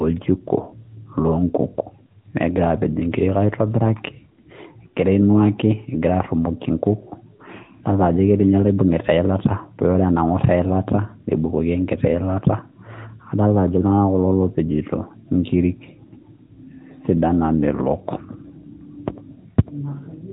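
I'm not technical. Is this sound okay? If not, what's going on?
No. The speech was squeezed through an AMR narrowband mobile codec, the compression used for ordinary 2G and 3G phone calls, and that affects the whole clip from start to finish. The codec rebuilds the voice from a simplified model of the throat and mouth and discards everything above about 3.8 kHz. The result sounds like a phone call: muffled, thin, and plainly processed, with a buzzy, synthetic edge to the voice.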